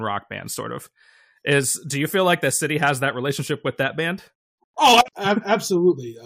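Nothing stood out on listening to this speech recording.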